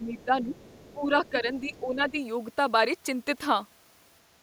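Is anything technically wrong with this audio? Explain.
Yes. From 0.0 to 0.54 s and 0.93 to 2.17 s, speech is suppressed in double talk. The level dips by up to about 10 dB, likely because the echo canceller ducked both talkers. On the waveform this shows as shrunken envelopes.

At 0.54 to 0.92 s, 1.25 to 1.39 s and 1.74 to 1.8 s, the other side's voice leaks through as faint scraps roughly 20 to 35 dB down. This is likely residual loudspeaker echo, and it shows as weak spectrogram traces.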